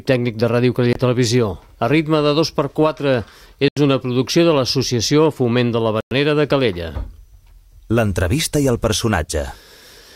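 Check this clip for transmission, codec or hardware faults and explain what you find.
Three short dropouts to dead silence, all with the same signature of a Bluetooth stall: 0.93 to 0.96 s (24 ms), 3.68 to 3.77 s (86 ms) and 6.01 to 6.12 s (107 ms). Each time the sound just stops and then carries on. The likely cause is interference delaying packets, so the headphones' buffer empties and playback waits until the resent packets arrive. You hear it as brief hard gaps.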